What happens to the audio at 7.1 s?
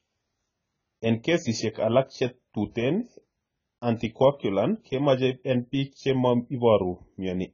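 At 7.1 s the speech carries damage present throughout. Nothing sounds above 7 kHz, and sibilants are dull, smeared and fizzy. The likely cause is heavy AAC compression, fitting roughly 16 kbps, where the coder drops the top band and starves fine detail.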